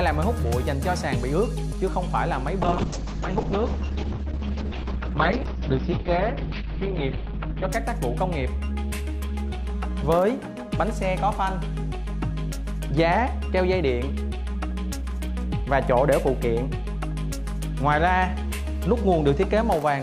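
From 2.63 to 7.75 s the sound turns rough and muffled, with everything above 6 kHz gone. This is a call bitrate drop: the bandwidth estimate fell and the encoder was starved of bits, which fits a fall from about 96 kbps to around 7 kbps.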